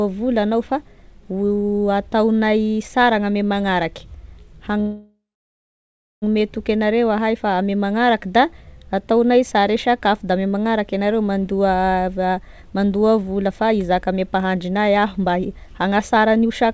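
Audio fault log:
4.80 to 6.24 s, call audio freeze: the speech stops and is replaced by a tail of buzzy, fading sound that sinks to silence for roughly a second, about 1.4 s of gap in all, before the talker resumes exactly where they left off with nothing lost. This is likely packets stalling in transit so the jitter buffer ran dry, the receiver stretching the last sound until the delayed audio arrived, which leaves everything after it about 1.4 s later.
12.23 to 16.73 s, jitter buffer speed-up: from here to the end the speech sounds hurried, running at about 107 percent of normal rate while the pitch stays where it was. The backlog built up after the stall was being drained: the receiver repeatedly cut out short slices one or a few pitch periods long, roughly 0.3 s of audio in total, to bring the delay back down.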